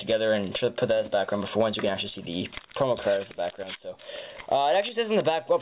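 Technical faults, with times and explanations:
No technical faults can be heard anywhere in this clip.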